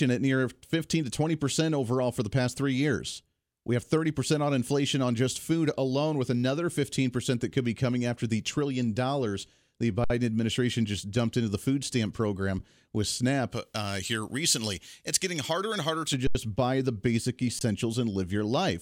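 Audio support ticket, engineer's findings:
Speech briefly freezes into flat holds with no click, resuming softly where it stopped. Underrun with held sample: output buffer ran dry and the DAC held its last value, nothing lost. At 10.04–10.1 s (60 ms, after "the trillion dollars the"), 12.59 s (about 10 ms, after "into the food stamp"), 16.27–16.35 s (80 ms, before "buy the basic"), and 17.59–17.61 s (20 ms).

Thin, bright, hissy sibilance from 13.53 to 16.14 s. Pre-emphasis left on: treble boost applied without the matching de-emphasis, about 11 dB up at 10 kHz relative to 1 kHz, consistent with a J.17 curve.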